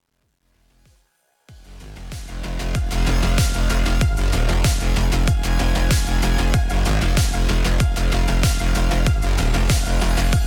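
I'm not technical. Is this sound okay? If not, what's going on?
No. The fade-in over the first 3.02 seconds has truncation distortion: the quiet start is stored too coarsely, so it sounds gritty, worst before 1.61 seconds.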